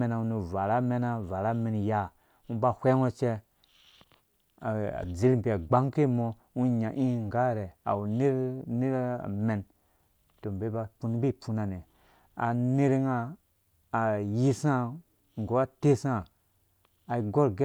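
No technical faults can be heard anywhere in the recording. Nothing in the audio calls for comment on timing or signal handling.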